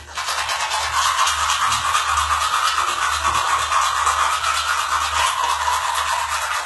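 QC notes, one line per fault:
throughout: HE-AAC compression, heavy damage, gritty metallic treble, nothing above 11.8 kHz; likely copied lower bands rebuilt as highs, fitting about 16 kbps.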